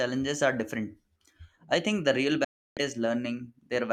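At 2.44 s the speech cuts out in a digital broadcast dropout: the receiver stopped getting usable frames and muted for about 0.33 s, consistent with roughly ten lost frames, returning at 2.77 s. A 3 ms fade gives a near-instant drop, showing as a flat silent gap in the waveform and a blank vertical band across the spectrogram.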